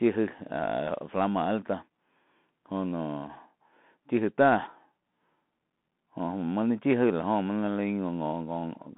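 Throughout, the speech passes through a Bluetooth CVSD headset codec, whose one-bit, adaptive-step coding cannot keep pace with loud, fast high sounds. Only about 150 Hz to 3.6 kHz survives, with nothing above 3.8 kHz, so s sounds turn scratchy over plainly audible granular hiss.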